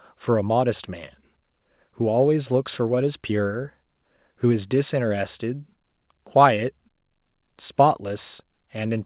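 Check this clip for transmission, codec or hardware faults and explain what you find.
No transmission, codec or hardware faults.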